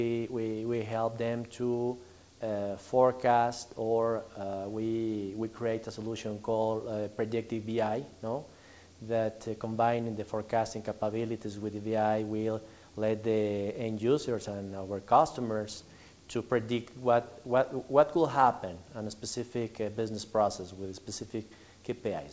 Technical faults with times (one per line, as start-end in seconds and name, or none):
none